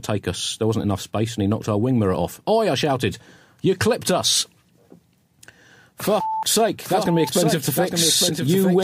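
A doubled audio track starts abruptly at 6.85 s and runs to the end: a full-band copy of the sound, a few decibels quieter, trails the original by about a second with no decay or room colour, likely from a second, slower capture path.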